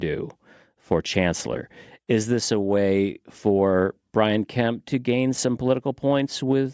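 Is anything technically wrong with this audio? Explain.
No, nothing technically amiss stood out on listening to this speech recording.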